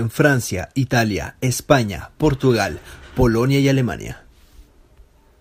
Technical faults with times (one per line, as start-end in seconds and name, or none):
none